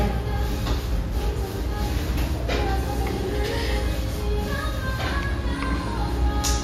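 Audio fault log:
Throughout: mains buzz, a raspy 60 Hz buzz fairly strong under the sound, with switching spikes spreading harmonics into kilohertz, unlike smooth, low hum.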